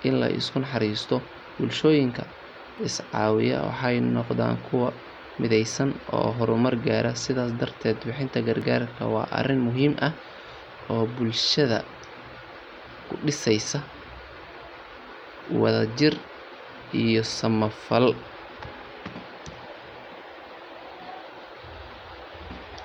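At 2.78 s and again at 8.62 s the speech jumps forward with no gap, losing something like 15 ms each time. That's most likely a dropped buffer (overrun): samples got overwritten before being read, and the two sides were joined straight together.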